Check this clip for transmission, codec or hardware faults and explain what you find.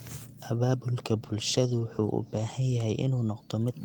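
One transmission fault is present: a call bitrate drop between 1.17 and 2.87 s. The call's bandwidth estimate fell, so the Opus encoder was told to cut its rate from 32 kbps to 17 kbps, staying at the low rate for about 1.6 s. With far fewer bits per frame, the speech is coded coarsely and the upper frequencies are trimmed away. The voice turns rough, watery or muffled over that stretch, then regains its clarity once the bitrate recovers.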